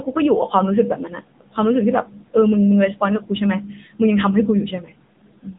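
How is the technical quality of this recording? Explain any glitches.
The recording has been through a low-rate mobile phone codec, and the damage is plainly audible for the whole clip.

AMR narrowband mobile codec, throughout: the speech was squeezed into a narrowband channel that keeps nothing above 3.8 kHz. Each 20 ms frame was rebuilt from a vocal-tract model excited by only a few pulses. The degree of coarseness fits an AMR-NB mode around 8 kbps. The result is muffled, telephone-like speech with a buzzy, synthetic edge on the voiced sounds.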